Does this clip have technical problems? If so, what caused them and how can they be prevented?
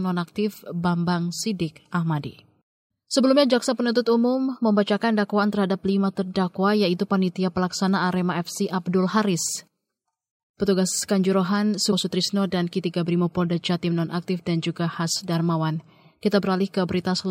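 Yes. A brief glitch at 11.91 s in the speech comes from damaged data in a compressed stream: corrupted bytes made the decoder misread a frame and resynchronise. Transferring and storing the file with checksums, and re-fetching any block that fails verification, would prevent it.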